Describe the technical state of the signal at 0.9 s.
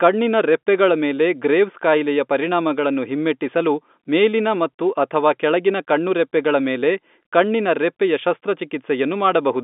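At 0.9 s the signal is intact, carried over an ordinary G.711 telephone line that passes only a narrow band from about 200 Hz to 3.6 kHz.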